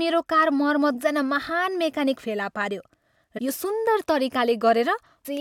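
At 3.37 to 3.39 s and again at 5.25 to 5.27 s the speech gets a brief blip, about 20 ms each, from damaged data in the compressed stream: corrupted bytes throw the decoder off, and it mangles those frames before resyncing on the next header.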